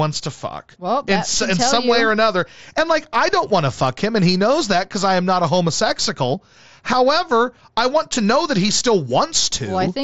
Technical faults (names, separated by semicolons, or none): none